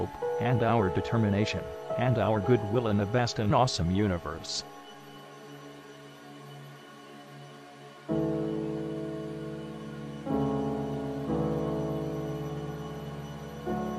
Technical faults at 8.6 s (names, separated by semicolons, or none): none